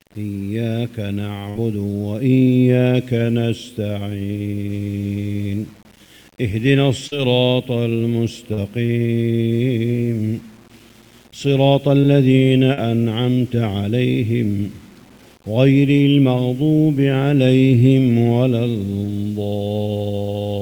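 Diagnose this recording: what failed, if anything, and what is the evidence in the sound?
The sample-format conversion stage likely reduced the audio to 8 bits by rounding without dither. A grainy distortion runs through the whole clip, sitting around 35 dB below the signal and tracking it, so quieter passages turn rough and gritty.

The network dropped a burst of packets between 1.49 and 1.57 s, losing about 60 ms of audio. The receiver extended the last sound for roughly 59 ms while fading it out, producing a held, decaying tone or hiss before playback resumes with that stretch missing.

Short concealed packet loss, also a network failure, occurs at 7.07 to 7.14 s, 8.53 to 8.59 s, 12.01 to 12.05 s and 12.73 to 12.79 s. Each hole was 40 ms, except 20 ms at 12.01 s. Concealment continued the preceding sound across each gap, leaving brief smears or wobbles.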